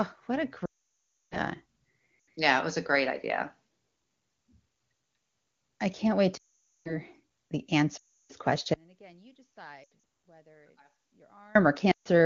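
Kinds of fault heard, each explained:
Lost AMR speech frames: Radio errors corrupted speech frames so they failed their checks, and the AMR-WB decoder filled each gap by repeating its last good pitch and vocal tract settings at falling gain. Long runs, such as 0.65 to 1.37 s after "what a" and 6.37 to 6.98 s after "i can't wait", smear briefly and then fade quickly to silence, as wideband does. Shorter losses near 2.2 s, 8.0 s, 9.8 s and 11.9 s drop briefly to near silence, and the voice returns weak or rough.
Audio dropout to a faint residue: From 8.74 to 11.55 s the wanted signal stops abruptly, likely because the source feeding the link was lost while the path after the break stayed live. For about 2.8 s only a faint trace remains, roughly 35 dB under the normal level. It cuts out and returns mid-flow with no fade, and the 9.8 s frame loss falls inside this weak stretch. The 23.85 kbit/s wideband coding shows little or no damage elsewhere.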